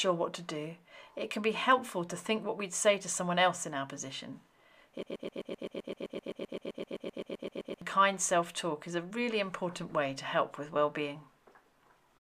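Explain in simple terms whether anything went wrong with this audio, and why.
Something clearly goes wrong from 5.03 to 7.82 s: the sound gets stuck in a broken-record loop. A tiny scrap, about 0.13 s long, repeats back to back roughly 22 times, giving a fast stutter for almost three seconds. The likely cause is the player or stream stalling and replaying the last bit it had in memory. Whatever should have played during those seconds is simply gone.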